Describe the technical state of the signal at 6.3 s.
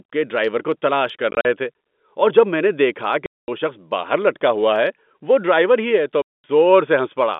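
At 6.3 s the audio falls inside a packet loss filled with silence: a 220 ms hard-edged gap from 6.22 to 6.44 s, just after "ڈرائیور ہی ہے تو". The duration fits about 10 ms packets.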